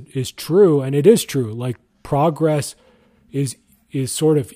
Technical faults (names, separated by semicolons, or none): none